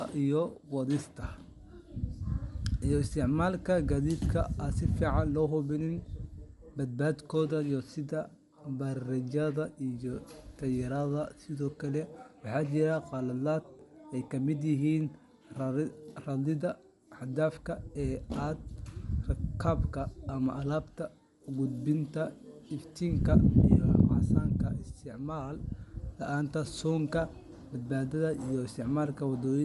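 Throughout the speech, nothing is present above 11.6 kHz, and the upper band sounds grainy and breathy, with fine detail replaced by noise fill. The damage is plainly audible and is likely Bluetooth LC3 compression, consistent with 10 ms frames at about 48 kbps.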